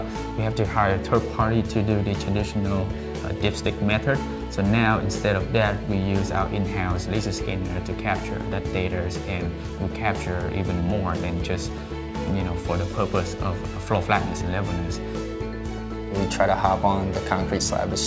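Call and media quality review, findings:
No faults found; the audio passes through the WebRTC call path with the expected wideband codec band limit, nothing above 8 kHz.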